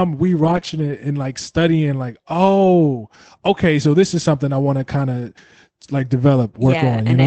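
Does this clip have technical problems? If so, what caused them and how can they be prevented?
Yes. Between 0.43 and 0.57 s, and again from 0.63 to 0.93 s just before "and like studying like", there's a lost packet rebuilt from error correction. Packets went missing, and Opus in-band FEC filled in lower-bitrate copies carried by the following packets. So there's no gap, but about 80 ms and then 160 ms of audio come out rougher and noisier. Preventing it mostly means fixing packet loss on the network path, for example by using a wired connection or reducing congestion.

In between, at 0.59 to 0.63 s, there's a short concealed packet loss. About 20 ms never arrived in time, so the decoder extended the preceding sound, continuing its pitch if it was voiced or shaping noise if it wasn't, then blended back into the real signal. You hear it as a brief smear. A slightly deeper jitter buffer, along with that same network cleanup, would help catch late packets.

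The call path itself sounds like a band-limited Opus stream, which fits roughly 24 kbps with audio up to 8 kHz.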